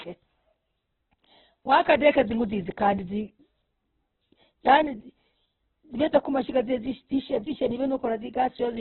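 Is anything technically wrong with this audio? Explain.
Yes. Throughout the speech the sound is dull and boxed-in, with nothing above 4.1 kHz, and the remaining tone is rough, grainy and noisy. This is likely heavy Opus compression: at a very low rate, around 8 kbps, the narrowed bandwidth discards the highs and gaps are filled with folded or noise-like content.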